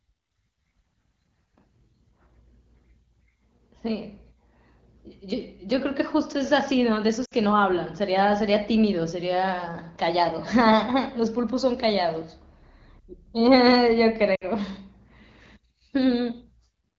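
Lost AMR speech frames at 7.25–7.33 s and 14.35–14.45 s. About 60 ms of HD Voice audio drops each time. The decoder repeats the last frame, so the sound briefly smears and fades.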